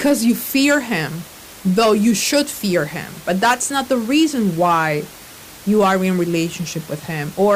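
Nothing technical goes wrong in this speech recording; there's just some ordinary room noise sitting about 21 dB below the voice, which comes from the space the microphone was in rather than from the system.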